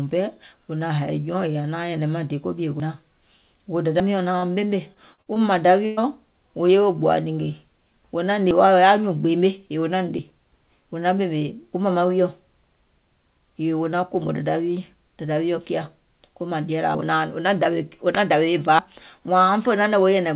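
At 2.8 s and again at 4.0 s the speech jumps forward. This is likely a dropped buffer (overrun): the capturing program fell behind and the hardware overwrote samples it had not yet read, so roughly 70 ms vanishes at each point. The audio on either side is spliced straight together with no gap of silence, so there is a sudden skip in the speech.

From 4.38 to 4.44 s, about 40 ms of the call failed to reach the decoder in time. This is short concealed packet loss: the receiver covered the hole by extending the preceding sound and then crossfaded back into the real signal. It comes across as a brief smear or wobble in the speech instead of a clean break.

Between 4.94 and 5.38 s, packets kept going missing, producing repeated packet loss (robotic sound). There are four separate holes totalling about 140 ms, the longest 57 ms, and concealment fills roughly a third of that span. Each patch runs into the next before the real signal has properly recovered, so this stretch sounds choppy, with fragments of speech missing. 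All of this sits inside the narrow G.711 call band, which has nothing above 4 kHz.

From 5.86 to 5.99 s, a burst of packet loss removes about 120 ms in one run. The receiver keeps the last sound going and lets it decay as the gap continues, so a voiced sound turns into a held, buzzing tone that fades. The speech then resumes further along, and the content that fell inside the gap is simply gone.

The likely overrun skips return later. At 8.51 s a jump comes just before "wa wò", losing roughly 40 ms. Similar jumps of roughly 40 ms occur at 10.19 s and 16.95 s. The largest comes at 18.79 s, where roughly 100 ms drops out.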